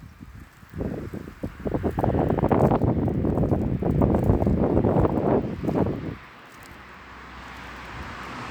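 No technical faults are audible.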